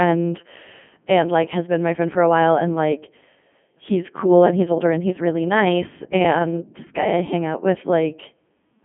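Codec 2 vocoder runs throughout the speech: a low-rate vocoder, which fits 3.2 kbit/s, rebuilds the voice from pitch, voicing and envelope parameters, so it sounds robotic and buzzy, with nothing above 3.7 kHz.

Overlap-add ripple, 4.45 to 7.25 s, just after "he's cool": frames rejoined with mismatched overlap swing the level about 11 dB around 200 times a second, a metallic buzz with extra tones.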